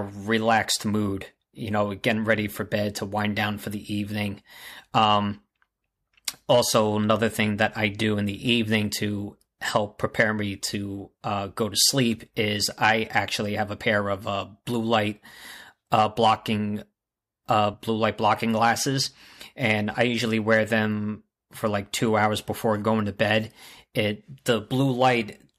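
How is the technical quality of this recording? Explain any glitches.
One glitch stands out in the speech. At 17.73 s, compressed frames were skipped: roughly one frame, about 30 ms, fitting a 26.1 ms codec frame, vanishes. Overlapping neighbour frames smear the join into a soft blip, unlike a dropout's silent gap or a hard click.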